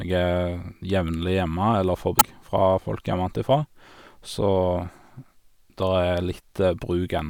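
At 2.17 to 2.23 s the speech breaks into a brief glitch, the sign of damaged data in a compressed stream: corrupted bytes make the decoder misread frames and resynchronise. A spectrogram shows a short disruption there, and the waveform a jagged discontinuity.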